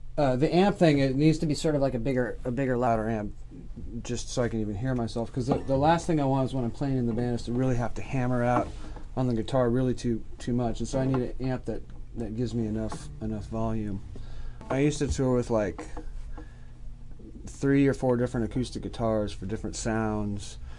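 From 1.38 s to 2.87 s the audio plays back at the wrong sample rate. The samples in that stretch are clocked out faster than they were captured, with no rate conversion. Speed and pitch therefore rise together by the same ratio: the sound runs about 1.09 times fast and sits roughly 1.5 semitones sharp. That ratio fits material recorded at 22 kHz being played at 24 kHz.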